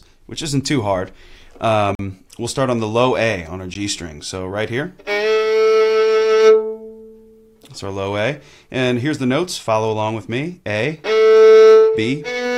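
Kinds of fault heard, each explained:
Bluetooth stall: the sound cuts to dead silence for 42 ms from 1.95 s and for 14 ms at 3.74 s, then resumes, likely because delayed radio packets let the headphone buffer run dry. The waveform shows flat gaps, and the spectrogram shows blank vertical strips across all frequencies.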